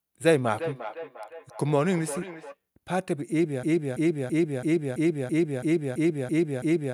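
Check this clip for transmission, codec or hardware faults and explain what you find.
Two faults are audible.

From 0.53 to 2.56 s there is feedback echo between two devices. A second device in the room replays the far end, and its sound re-enters the microphone uncancelled. The speech returns roughly every 0.4 s, thinner and ringing, peaking about 11 dB below the speech.

From 3.63 s to the end there is a broken-record loop. The stream or player likely stalled and kept resending its last held fragment. A 332 ms piece repeats exactly, back to back, about ten times, and the audio that should have followed is lost.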